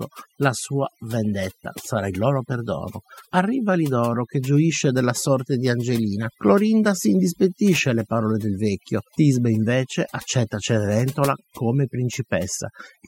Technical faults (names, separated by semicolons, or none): overdone noise removal